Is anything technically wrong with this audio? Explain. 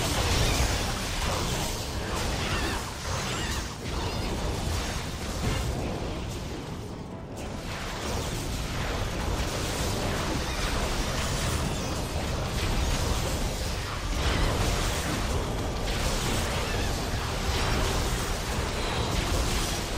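Yes. There is a drift correction step from 6.83 to 8.05 s. For about 1.2 seconds, the playback runs roughly 5.9% fast. Pitch rises by about 98 cents, close to a full semitone, and speed and pitch move together. The likely cause is clock-matching software changing its rate in one jump to drain or refill its buffer. Real corrections are far smaller. Here the sound is suddenly detuned upward, then drops back at 8.05 s.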